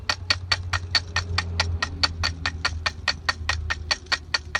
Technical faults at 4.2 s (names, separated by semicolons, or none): none